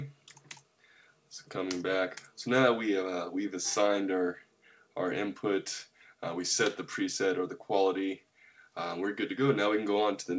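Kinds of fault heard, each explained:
No faults detected; the band stops at 8 kHz, consistent with a G.722-type wideband call codec working as intended.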